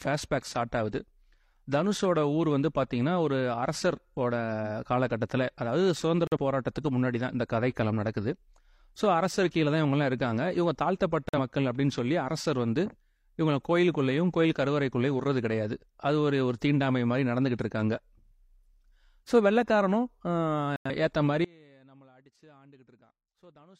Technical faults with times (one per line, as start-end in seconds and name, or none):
4.61-4.66 corrupt frame decoded
6.27-6.37 corrupt frame muted
11.29-11.39 corrupt frame muted
20.76-20.90 corrupt frame muted
21.45-23.79 audio dropout to a faint residue